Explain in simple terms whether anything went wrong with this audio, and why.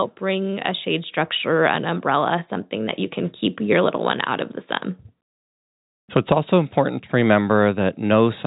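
Nothing went wrong here.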